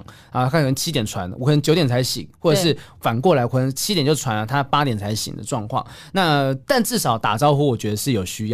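No technical faults are audible anywhere in this speech recording.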